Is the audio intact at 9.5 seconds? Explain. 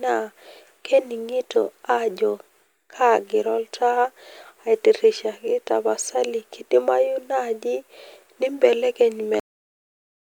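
No. A cut-off end starts at 9.40 s, so the speech stops abruptly and only digital silence remains from there to 10.31 s, which includes the 9.5 s point. The final stretch of audio was never written out or played back, leaving the recording truncated partway through a sound. Instead of tailing off naturally, the level falls straight to nothing with no decay, and no reverberant or fading ending can be heard.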